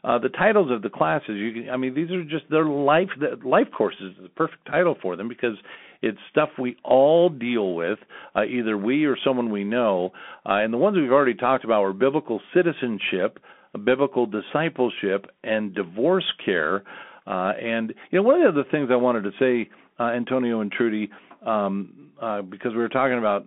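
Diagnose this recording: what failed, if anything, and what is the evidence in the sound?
Codec stage: a Bluetooth CVSD headset codec throughout, with plainly audible one-bit, adaptive-step coding damage. The spectrogram shows a 250 Hz to 3.4 kHz band, empty above 3.8 kHz.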